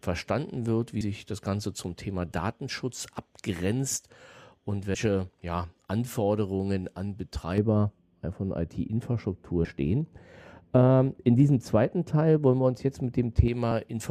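At 1.01 s, right after "wird wie", compressed frames are skipped: a couple of 32 ms frames vanish, so the speech jumps ahead around 70 ms. The same happens at 4.94 s after "abgrenzt und" and at 9.65 s, each losing a few frames, roughly 100 ms. From 7.58 to 13.48 s, de-emphasis applied wrongly slopes the treble down about 11 dB at 10 kHz, so it sounds dull and muffled.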